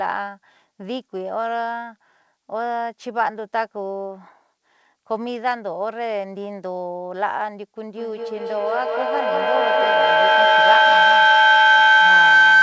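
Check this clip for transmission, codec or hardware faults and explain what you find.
One fault stands out: feedback howl, starting at 7.93 s and running to the end of the speech clip. It sounds like a piercing tone around 1.5 kHz that swells in pulses roughly every fifth of a second and peaks at about 12 dB above the speech. Two devices in the same room were likely on the call together. Each pass from loudspeaker back into microphone added level, so the repeats grew and narrowed onto the pitch the loop favours. The audio is band-limited, with nothing above 8 kHz, which fits a wideband call codec such as G.722.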